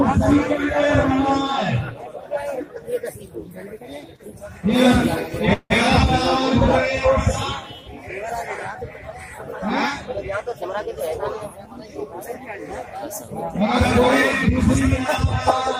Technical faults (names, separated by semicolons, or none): call audio freeze; jitter buffer speed-up